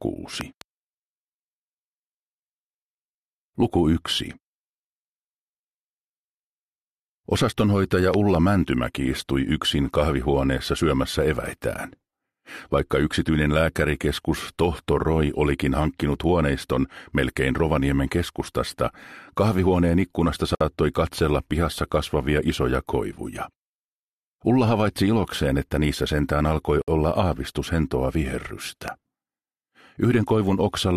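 A loud pop, doubled, hits at 0.41 to 0.63 s at about 10 dB above the sound and again at 8.14 to 8.37 s at about 15 dB; a single one lands at 28.88 to 28.90 s. Each is likely an electrical pulse from a plug, switch or static, riding on top while the sound carries on underneath.

A gap at a join of encoded pieces opens at 20.55 s for 57 ms and at 26.82 s for 61 ms: silences with smeared edges from untrimmed encoder delay and padding, after which the sound resumes exactly where it stopped, unlike a pop.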